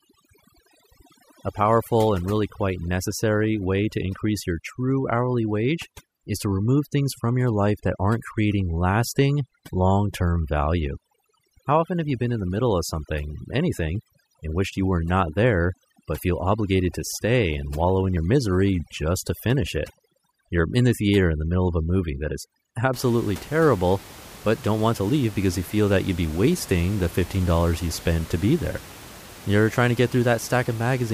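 From the start to about 22.9 s there's overdone noise removal. The suppressor was set too hard against room noise sitting about 20 dB under the speech, so it's pulling individual bands down whenever they look noise-like. Gaps drop and break up into twinkly specks, and quiet parts of the speech get pulled down with them.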